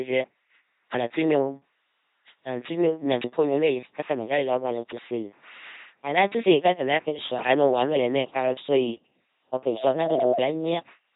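Throughout, the speech has a buzzing, mechanical robot quality with nothing above 3.8 kHz, the sound of an LPC-10 vocoder, likely at 2.4 kbit/s, rebuilding each moment from a pulse train or noise.

From 9.71 to 10.51 s a steady 638 Hz tone swells over about half a second to roughly the speech's level: loudspeaker feedback squeal, the microphone re-amplifying its own loudspeaker.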